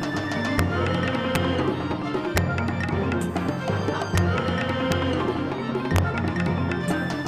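Integer overflow cracks at 0.59, 1.35, 2.37, 4.18 and 4.92 s, and from 5.96 to 5.98 s. Loud peaks, driven up to about 2 dB past the largest integer, wrapped to the opposite sign rather than clipping, so each jumps across the full range as a violent crack.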